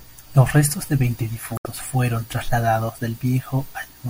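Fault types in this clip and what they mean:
Damaged data in a compressed stream: corrupted bytes make the decoder misread frames and hunt for sync, giving a brief glitch from 1.55 to 1.66 s, between "restos de veinte" and "fueron trasladados". A spectrogram shows a short disruption; the waveform shows a break.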